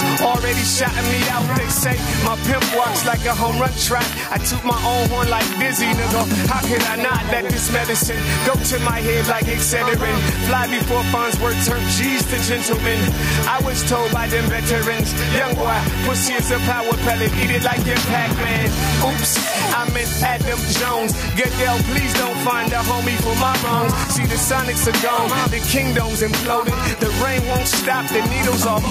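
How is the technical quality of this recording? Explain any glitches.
The recording has one problem running right through it: gain pumping. The gain keeps swinging by around 5 dB. That's most likely the input gain set way too hot with a fast limiter clamping it back on every peak, so everything sounds squashed.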